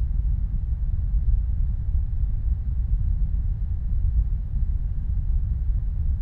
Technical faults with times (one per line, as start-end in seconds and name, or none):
none